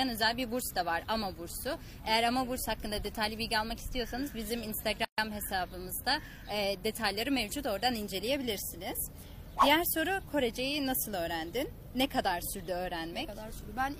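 At 5.05 s a gap at a join of encoded pieces cuts the sound for about 134 ms, until 5.18 s. Two separately encoded segments were joined untrimmed, leaving encoder start delay and end-frame padding in place; the codec softens the gap's edges before the sound resumes where it stopped.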